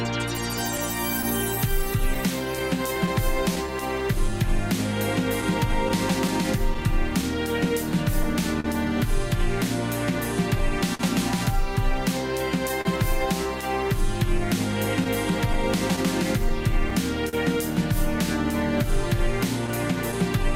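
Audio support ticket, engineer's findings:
Clock drift between sender and receiver, whole clip: Faint recurring timing hiccups, unevenly spaced, with a slightly unsteady pace. Sender clock about 2% slow relative to receiver. The jitter buffer keeps draining, forcing the receiver to pad and occasionally run dry.

Repeated timing corrections, 1.70–20.39 s: Small stretches and repeats spread across the clip, all lengthening the audio and adding roughly a tenth of a second in total. Receiver-side playout adjustment compensates for the slow sender clock and keeps the buffer from emptying.

Scattered short gaps, 0.77–3.58 s, 5.41–8.66 s, 15.04–17.35 s and 18.83–20.15 s: Brief ticks and smears. About seven per span, three in the last. The longest runs about 10 ms in the first and last spans and about 40 ms in the middle two. Lost or late packets are concealed by extending the preceding sound.

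Short stall from a late packet, 10.95–11.01 s: Sound is held briefly, with a slight buzz or dip, then resumes. A 43 ms gap opened when the jitter buffer underran, and concealment stretched the last frame until the late packet arrived. Nothing is lost, only delayed.

Short stall from a late packet, 12.81–12.87 s: Another brief hold with the same texture, 38 ms long. The buffer ran empty again waiting on a late packet. The last sound was extended, and playback continued from the same point.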